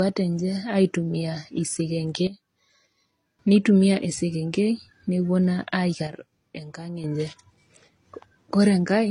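The speech carries the sound of transcoding between lossy codecs from start to finish. Nothing is present above 10.1 kHz. Two sets of artefacts are heard together. This likely comes from AAC-LC coding re-encoded as HE-AAC, both around 32 kbit/s.

At 2.27 s a sudden gain jump drops the level by about 12 dB. Speech and background fall together, then return at 3.39 s. At 6.07 s it drops by about 8 dB, recovering at 7.04 s. Each step is abrupt. Each is likely an unramped digital gain change.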